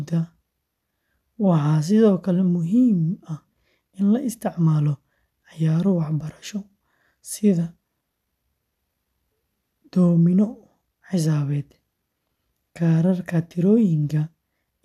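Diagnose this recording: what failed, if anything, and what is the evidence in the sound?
Nothing failed; no faults heard.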